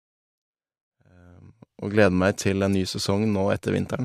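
Nothing stood out on listening to this speech clip; the level rises in a smooth fade-in that reaches full level at 2.02 s, just as an editor would shape it.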